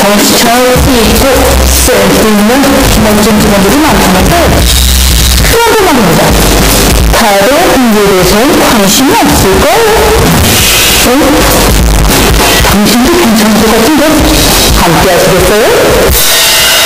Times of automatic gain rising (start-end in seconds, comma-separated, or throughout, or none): none